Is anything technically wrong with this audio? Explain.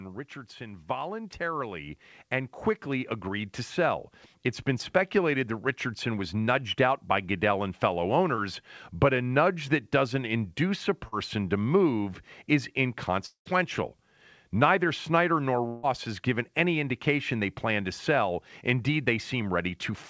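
Yes. Automatic gain rising runs from 0.57 to 6.41 s: the gain control judged the input too quiet and raised its level by about 12 dB over nearly six seconds. The speech and the background swell upward together.

Short concealed packet loss occurs at 8.36–8.40 s and 11.08–11.14 s. Roughly 20 ms, then 40 ms, of audio arrived too late, and the receiver patched each gap by extending the preceding sound before blending back. Both are heard as brief smears or wobbles.

Two longer gaps follow at 13.26–13.47 s and 15.67–15.85 s, most likely long network dropouts. At 13.26 s the last sound is stretched into a fading continuation that gives way to about a tenth of a second of silence. At 15.67 s a fading continuation fills the whole gap. After each gap the speech resumes with that stretch missing. Through all of this the call codec's band limit is audible as nothing above 8 kHz, which fits G.722.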